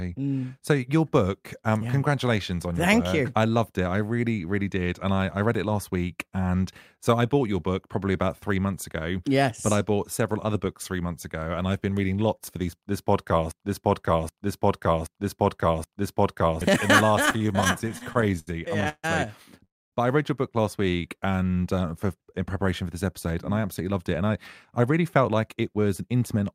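At 13.51 s, just after "lots for these this", a broken-record loop begins. A piece of about 0.78 s plays back to back, four times, until 16.62 s. Each pass is an exact copy. The likely cause is a player or stream that stalled and kept resending the last fragment it held. Whatever should have played in those three seconds is gone.

From 17.23 s to 19.05 s there are repeated stalls, heard as stutter. The flow catches 23 times. Each time, the last sound is held and stretched to fill the wait. The longest wait is 145 ms. Together they add 478 ms, about a quarter of the span. Nothing is lost. Packets were arriving late, and the jitter buffer kept running dry. The sound drags and trips.

At 19.65 s comes a call audio freeze, lasting to 19.94 s. The last sound hangs briefly, then drops to silence for most of the 277 ms gap, about 240 ms of it. Then the audio resumes exactly where it stopped. Nothing is missing, but a hole has been opened. 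Packets held up in transit, emptying the jitter buffer, are the likely cause.

Between 20.83 s and 21.44 s, after "read your book last" and before "uh for in preparation", there is a jitter buffer slow-down. The speech runs at 86% of its pace, yet the pitch stays put. About 94 ms has been added. The receiver repeated single pitch periods and bits of pause to rebuild its reserve. Sounds are drawn out and slightly sluggish.

A jitter buffer speed-up follows at 23.25 s, after "in preparation for this", and runs to 24.31 s. A second one runs from 24.79 s to 26.53 s. Both play at 109% speed with unchanged pitch. Roughly a tenth of a second is cut from the first, roughly 0.15 s from the second. The buffer held more than its target, so the receiver trimmed short pitch-period slices. The speech sounds hurried.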